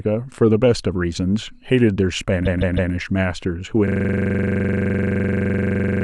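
At 2.44 s the speech stutters. A block of about 157 ms plays three extra times, through to 2.91 s. This is repeated frames: a run of compressed frames was written or delivered more than once, and the decoder played the same stretch again. The block length suggests several codec frames were duplicated together. The repeats add 470 ms to the clip's length.

From 3.88 s to the end, a single 42.67 ms slice of audio loops exactly, about 50 times. At a 23.4 Hz repetition rate it is heard as a steady, rough buzz rather than separate stutters, and the speech does not resume. This is a system hang loop. The computer or driver stopped delivering new data while the sound hardware kept cycling through the same ring buffer, and a loop of this length fits a 2048-sample buffer.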